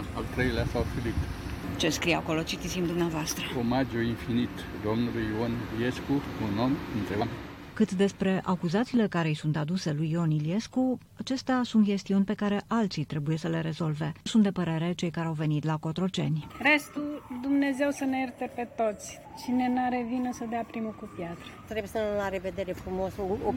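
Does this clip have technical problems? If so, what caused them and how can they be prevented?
Yes. A brief glitch at 7.2 to 7.22 s comes from damaged data in a compressed stream: corrupted bytes broke a frame, so the decoder lost sync and jumped to the next valid header. Checksummed storage and verified transfers prevent this.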